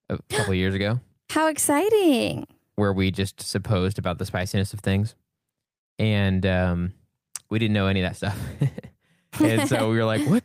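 Nothing technical goes wrong at any point in this bit of speech, so there's no fault to point to anywhere along the way.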